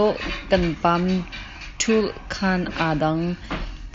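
A speech clip carried over a Bluetooth mSBC headset link, with nothing technically wrong with it.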